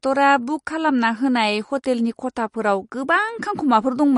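From start to finish the speech carries a watery, swirling texture with nothing above 10.6 kHz, the signature of MP3 compression, likely at a low bitrate around 40 kbps. Short of bits, the encoder discards the treble at a fixed ceiling and drops weaker frequency lines that flicker in and out between frames. That flicker is what separates it from a plain low-pass filter, which would dull the top cleanly without the restless, metallic swirl.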